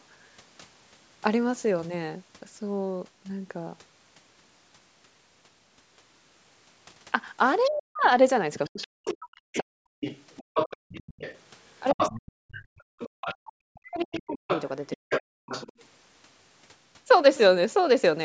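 From 7.64 to 15.73 s a second voice sits roughly 10 dB under the talker. This is the other side's voice leaking through, likely loudspeaker echo the canceller failed to remove. Within that stretch, from 7.69 to 10.04 s, the talker's voice dips by as much as around 40 dB, about a second and a half in all. This is likely speech suppressed in double talk, with the canceller turning down both voices at once. From 10.43 to 10.89 s the room sound briefly drops away, by about 37 dB, for a fraction of a second. This is background gated by the echo canceller as it clamps the microphone during loudspeaker playback. From 11.94 to 15.41 s the talker dips again, by around 40 dB for roughly a second and a half in total, likely the same double-talk suppression. Inside that span, from 12.82 to 13.13 s, the background gates out once more by about 36 dB. Throughout, the call's microphone processing leaves nothing above 8 kHz.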